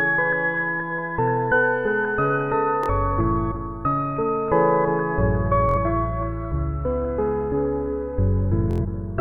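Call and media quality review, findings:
Bluetooth stutter, music at 2.84–2.90 s, 5.69–5.78 s, 8.71–8.81 s. Buzzy repeat of the last short slice while packets arrive late, then playback jumps ahead, skipping about 46, 70 and 93 ms, which fits two, three and four lost frames. Probable component: wireless link.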